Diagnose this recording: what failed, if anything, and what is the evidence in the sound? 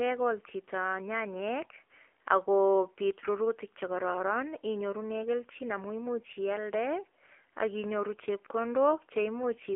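The whole 10 seconds of speech sound boxy and buzzy, with a plainly audible synthetic edge. Nothing survives above about 3.5 kHz, and the lows thin out below roughly 300 Hz, leaving a telephone-line band. This is the AMR narrowband mobile codec at the codec stage. It resynthesises the voice from a vocal-tract model fed by sparse pulses, and the degree of buzziness points to one of its lower modes, around 7.4 kbps.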